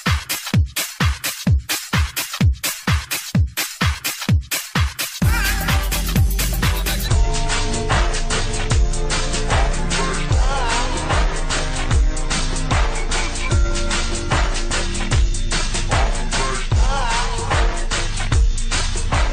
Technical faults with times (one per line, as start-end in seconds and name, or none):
7.08-19.32 section at the wrong speed